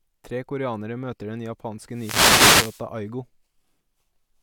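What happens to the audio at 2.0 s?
A wireless microphone noise hit runs from 1.91 to 2.86 s, just after "koreanere møter den": the FM radio link fades, so receiver static swells into a short swish over the speech.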